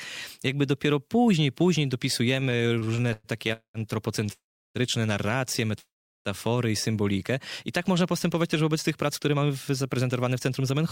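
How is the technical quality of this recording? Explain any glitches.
The quality is poor in the middle and end of the clip. Network timing problems cause repeated stalls, several freezes, a brief hold, and two tempo shifts.

Repeated stalls (stutter), 2.35 to 3.52 s: packets kept arriving late, so the jitter buffer ran dry 16 times. Each time the receiver extended the last sound until data arrived, filling 337 ms in total, about 29% of that stretch, with the longest gap 111 ms. Nothing is lost, but the audio drags and stutters.

Call audio freeze, at 3.53 to 3.77 s, 4.32 to 4.78 s and 5.79 to 6.28 s: the audio halts for 214 ms, 423 ms and 465 ms respectively. The last sound is held briefly and then dies away, leaving 110 ms, 350 ms and 380 ms of silence. Packets were likely held up in transit, emptying the buffer. Playback then resumes where it stopped, so each freeze inserts a gap rather than cutting anything out.

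Short stall from a late packet, 4.26 to 4.31 s: a single packet missed its playout time, and the receiver stretched the preceding sound by 19 ms before continuing from the same point. It comes just before the second freeze. Nothing is missing, but that moment sounds held slightly too long, with a faint buzz or dip.

Jitter buffer slow-down, 6.92 to 7.20 s: with its reserve running low or its target delay just raised, the receiver repeated single pitch periods and bits of pauses to add 39 ms. Playback runs at 89% speed with unchanged pitch, so the sound is drawn out and may warble slightly.

Jitter buffer speed-up, 9.05 to 10.79 s: now holding more audio than its target, the receiver trimmed short pitch-period pieces, about 150 ms in all. The audio plays at 109% speed with unchanged pitch and sounds hurried.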